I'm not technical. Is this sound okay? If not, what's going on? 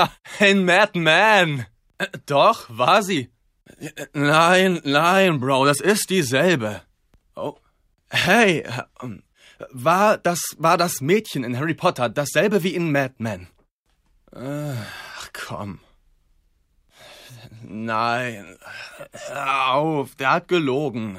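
Yes, this sound is okay, and nothing is going wrong in it.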